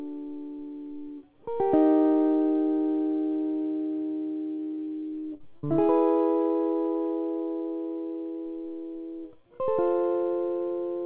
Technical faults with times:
4.48-5.65 repeated packet loss (robotic sound)

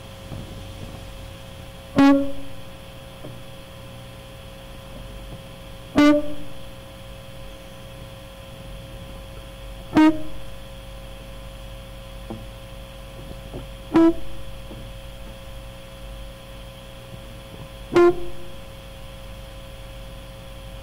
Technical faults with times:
1.98-2.13 hard clipping
5.98-6.14 hard clipping
9.97-10.10 hard clipping
13.96-14.09 hard clipping
17.96-18.09 hard clipping

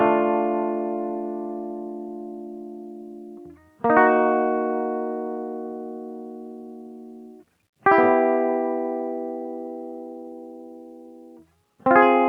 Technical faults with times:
none

